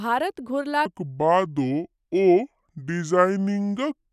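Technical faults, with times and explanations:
0.86–4.13 s, wrong sample rate: from 0.86 s to the end, the speech drops to two-thirds speed (0.667x) and its pitch falls by about 7 semitones at the same time, so the voice sounds low, slow and heavy. Because speed and pitch shift together by one fixed ratio, the samples are being clocked out slower than they were captured, with no rate conversion. A 2:3 ratio fits 48 kHz material played back at 32 kHz.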